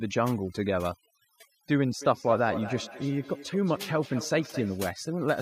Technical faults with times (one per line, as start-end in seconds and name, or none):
0.00-5.41 overdone noise removal
2.01-4.91 feedback echo between two devices